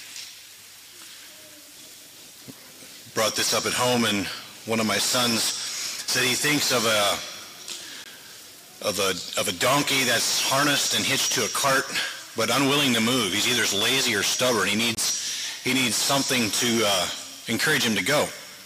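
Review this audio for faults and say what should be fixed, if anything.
Two blocks of digital silence, at 8.04 s (17 ms) and from 14.95 to 14.97 s (23 ms, which fits a 1024-sample buffer). The output cuts straight to zero and back with no fade. The waveform shows a flat line, and the spectrogram shows a blank vertical strip edged by broadband streaks. Give the audio callback more buffer headroom so each block is filled before it is due.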